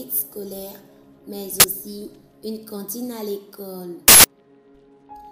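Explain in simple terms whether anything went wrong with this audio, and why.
Uninitialised buffer faults occur at 1.6 s, lasting 40 ms, and at 4.08 s, lasting 160 ms. Each is a sudden loud crack or burst of harsh digital noise. The player sent out chunks of memory before any sound had been written into them, so leftover data played as noise.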